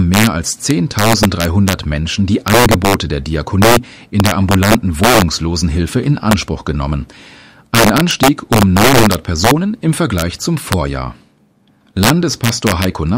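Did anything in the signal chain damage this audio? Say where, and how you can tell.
Yes. Integer overflow runs throughout. The gain in the sample-format conversion is about 6 dB too hot. A small share of peaks wrap to the opposite sign, causing sharp cracks.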